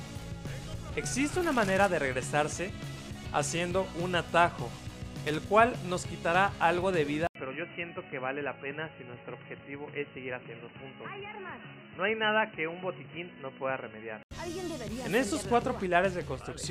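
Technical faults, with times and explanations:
5.27 to 5.35 s, loose connector crackle: a brief scratchy burst, like a worn contact making and breaking as the cable shifts, chopping the signal.
7.27 to 14.31 s, input switched to a poorer device: after an 80 ms dropout the sound goes dull, nothing above 3 kHz, roughly 5 dB quieter, with new noise well under the signal, likely a change to another microphone or headset.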